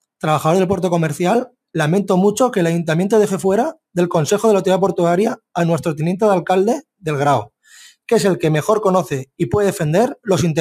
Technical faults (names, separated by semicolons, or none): none